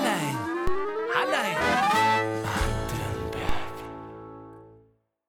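A DC step occurs twice, at 0.67 s and 3.49 s: the waveform's zero line jumps abruptly by about -16 dBFS, then drifts back as a 2 Hz high-pass bleeds the offset away. Each jump produces a low thump beneath the continuing sound.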